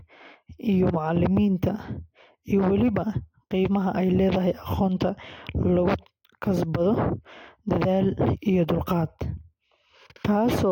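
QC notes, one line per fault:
No faults to note for this speech clip.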